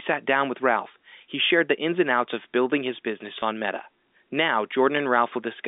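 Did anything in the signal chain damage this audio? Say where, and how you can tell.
Yes, in the network. From 3.40 to 3.42 s the speech briefly holds a slightly buzzy, frozen tone. That is packet loss with pitch repetition: 20 ms went missing, which fits one lost packet, and the receiver bridged the gap by repeating the last pitch period.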